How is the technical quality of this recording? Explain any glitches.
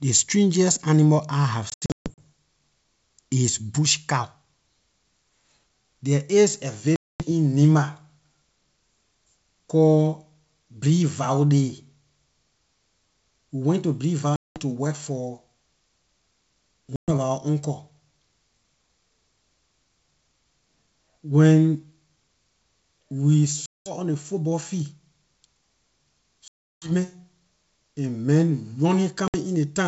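Packet loss on an ADPCM call breaks this speech recording up seven times: 1.70–2.21 s after "strangest animal I have", 6.96–7.26 s after "there is a", 14.36–14.60 s between "we went to" and "to work for", 16.96–17.12 s, 23.66–23.92 s, 26.48–26.92 s and 29.28–29.36 s. Each time, a run of packets (roughly ten to fifteen at the longest) never arrived and was filled with silence. The first event scatters 320 ms of loss over 480 ms, with the longest run 140 ms. Because the decoder's adaptive predictor and step size drift out of step with the sender's during the gap, each hard-edged hole is followed by slightly distorted speech, at times with a click or at the wrong level, settling over some tens of milliseconds. The wideband G.722 coding is clear up to 7 kHz, which fits 64 kbit/s.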